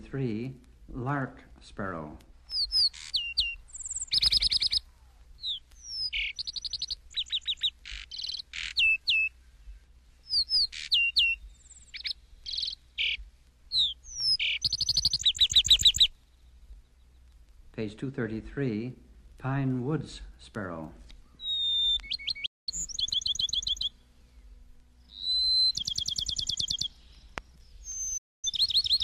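At 22.46 s the sound fades out in about 8 ms and stays silent until 22.73 s. At 28.17 s the same happens again, lasting until 28.48 s. Both are digital broadcast dropouts. The receiver stopped getting usable frames and muted its output. The gaps point to roughly five and six lost frames. Whatever was broadcast during each hole is gone. The audio resumes mid-programme, not from where it stopped.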